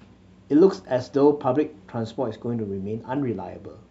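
Speech recording with no audible technical faults.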